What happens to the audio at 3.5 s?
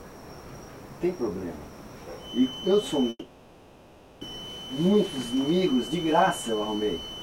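At 3.5 s the audio is inside a long network dropout running from 3.09 to 4.23 s, likely packets that never arrived. The receiver stretches the last sound into a fading buzz or hiss for about 1.1 s, then briefly goes silent, and resumes with that stretch missing, unlike a short glitch. Underneath, a feedback whistle at 3 kHz persists from 2.16 s to the end, likely a speaker-to-microphone loop held just below runaway, so it stays thin, at one pitch, swelling and fading slowly rather than swelling into a howl.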